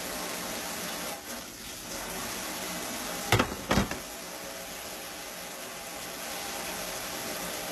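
An everyday sound recording with HE-AAC compression damage throughout. Nothing is present above about 12.3 kHz. The treble sounds synthetic, likely rebuilt from copied lower bands, so its harmonics fail to line up. The plainly audible damage points to a very low bitrate, near 16 kbps.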